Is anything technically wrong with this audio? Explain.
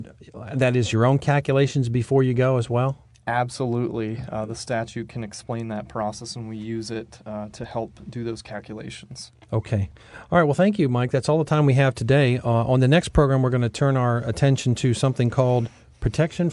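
No, no technical faults heard.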